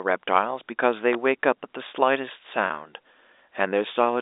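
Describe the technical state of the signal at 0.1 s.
At 0.1 s the signal is intact, with the speech carried cleanly through the G.711 telephone coding and its narrow line band of roughly 300 Hz to 3.7 kHz.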